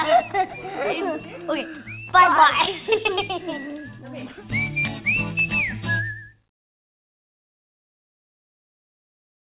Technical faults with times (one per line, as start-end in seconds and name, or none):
none